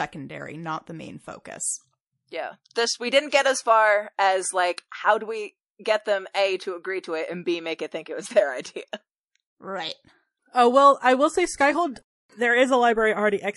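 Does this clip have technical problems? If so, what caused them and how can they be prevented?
Yes. Throughout the speech the encoder is likely starved of bits by heavy MP3 compression, with damage that fits a rate around 48 kbps. To save data it cuts the treble at a fixed point and drops weak frequency lines that flicker on and off between frames. The voice therefore sounds dull and watery, with swirling and metallic chirps on s sounds. Encoding at a higher bitrate, or with a less lossy codec, would prevent this.

Pre-echo appears twice. The codec smears each block's quantisation noise evenly across the block, so when a sharp onset lands late in a block, noise meant for the loud part leaks into the quiet moment before it. This happens from 3.30 to 3.32 s, a hiss about 25 ms long and about 15 dB above the background, and from 6.32 to 6.35 s, about 28 ms long and about 11 dB up. Both fit long transform blocks of roughly 48 ms with no switch to shorter ones. 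Each onset is preceded by that brief hiss and sounds softened. An encoder that switches to short blocks on transients, along with a higher bitrate, would prevent it.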